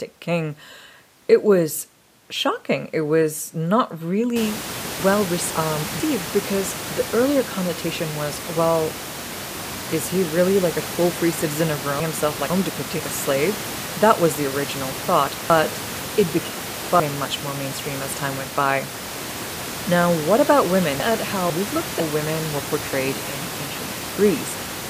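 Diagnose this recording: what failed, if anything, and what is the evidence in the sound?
Chunks out of order, at the buffer or storage stage where the audio is assembled in blocks. Four jumbled passages fall at 5.0–6.0 s (between "was not really" and "because the earlier connotation"), 12.0–13.0 s, 15.5–17.0 s (after "was the original thought", before "much more mainstream as") and 21.0–22.0 s (between "what about" and "women were portrayed in"). Each is built from 500 ms blocks. In each, one block lands late, by one block or by two at 15.5 s, and plays after the blocks that should follow it. Nothing is missing, but the sequence is scrambled, leaving three hard joins per event.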